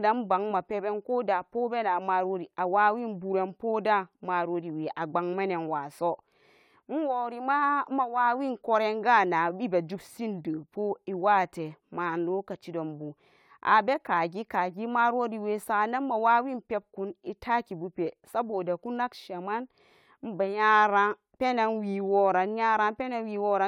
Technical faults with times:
none

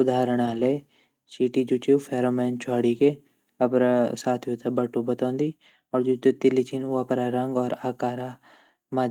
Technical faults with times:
0.45-0.59 lost packet rebuilt from error correction

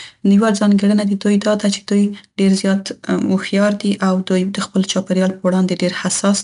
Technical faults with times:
0.00-6.43 4-bit ADPCM compression

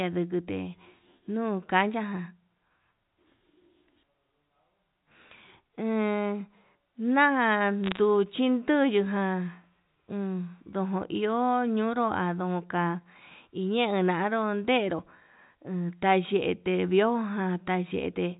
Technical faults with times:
7.84-7.98 bit errors on a digital phone line

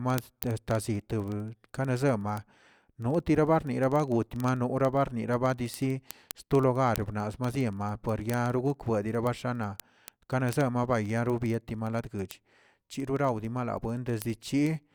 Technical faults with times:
0.10-14.94 word clock ticks

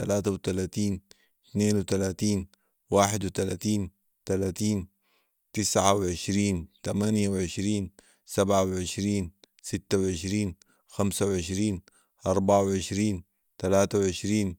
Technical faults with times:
none

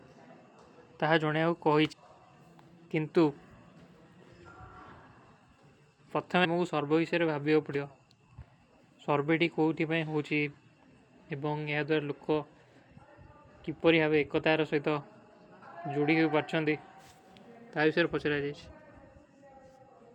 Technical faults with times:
1.91 compressed frames skipped
4.91 compressed frames skipped
6.44-6.46 compressed frames skipped
15.61 compressed frames skipped

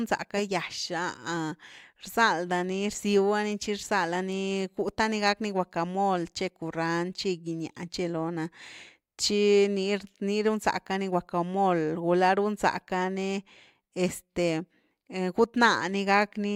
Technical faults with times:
none

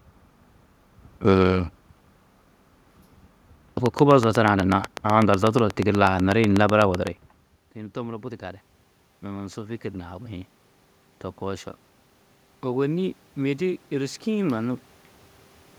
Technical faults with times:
3.86-7.08 train of clicks
12.62-14.84 automatic gain rising

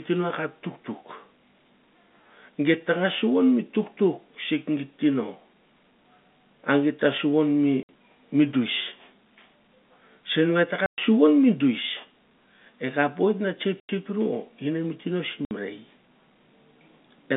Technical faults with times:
7.83-7.89 packet loss filled with silence
10.86-10.98 packet loss filled with silence
13.80-13.89 packet loss filled with silence
15.45-15.51 packet loss filled with silence

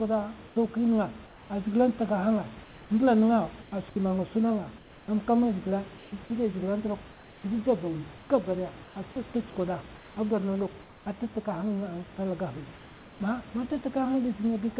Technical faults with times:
0.48-1.50 comfort noise in place of the background
2.64-3.72 comfort noise in place of the background
4.78-5.08 comfort noise in place of the background
5.98-6.12 comfort noise in place of the background
7.12-8.96 comfort noise in place of the background
9.96-11.06 comfort noise in place of the background
12.78-13.20 comfort noise in place of the background

